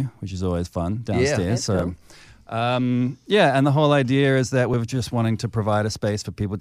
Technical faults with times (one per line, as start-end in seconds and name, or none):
1.79 dropped buffer (overrun)
4.74 dropped buffer (overrun)